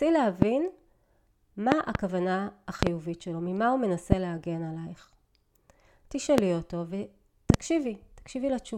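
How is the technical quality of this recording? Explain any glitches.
The speech is interrupted by six loud pops. They fall at 0.42 s, 1.72 to 1.97 s (a double), 2.83 to 2.89 s (double), 4.12 s, 6.38 s and 7.50 to 7.56 s (double). These are likely voltage pulses from a switch, plug, static discharge or driver glitch. Each peaks about 25 dB above the speech, and about 20 dB at 4.12 s. On a waveform they show as tall, narrow spikes; on a spectrogram, bright full-height vertical lines.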